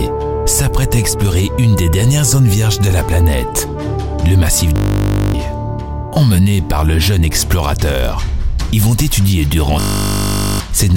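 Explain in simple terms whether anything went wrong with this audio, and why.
At 4.76 to 5.34 s and again at 9.8 to 10.6 s, the sound turns into a steady 50 Hz buzz. This is a system hang loop: the computer briefly froze while the sound hardware kept replaying one 20 ms slice, losing about half a second and then about 0.7 seconds of audio.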